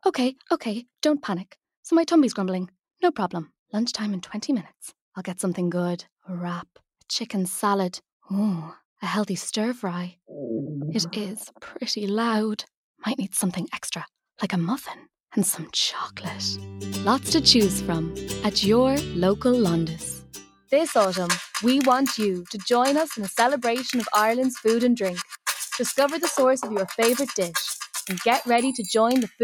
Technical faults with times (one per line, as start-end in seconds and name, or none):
20.19-20.72 sound cut by the noise suppressor